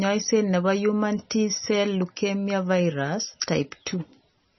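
Speech running through heavy MP3 compression across the whole clip: everything above 5.9 kHz is missing, and weak detail flickers in and out with a watery, swirly quality, which fits a bitrate near 24 kbps. Plain low-pass filtering would dull the top without that swirl, so this is likely an MP3 encode.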